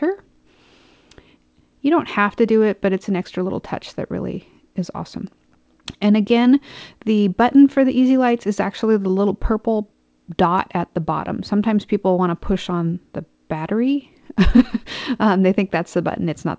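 The audio has come through a wideband call path, and with nothing above 8 kHz its band limit fits a G.722 codec, while no technical faults can be heard anywhere in the clip.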